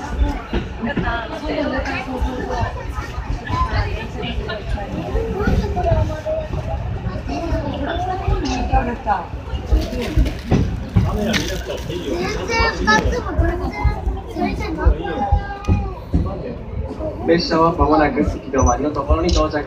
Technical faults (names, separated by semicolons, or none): none